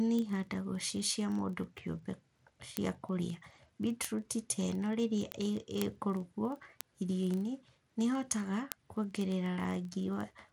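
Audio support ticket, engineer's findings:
Bluetooth SBC compression, throughout (0 to 10.5 s): dull, flickering treble with gritty noise over the speech. Likely a starved SBC link, which fits a low bitrate near 96 kbps. Top sub-bands lose their bits, and the remaining bands are coarsely quantised and alias.

Word clock ticks, 0.12 to 10.49 s: sharp, uneven ticks at a steady rate of about one every 40 ms, a few hundred in total. The receiver is free-running against the sender at roughly 500 ppm, and each clock slip drops or repeats one sample.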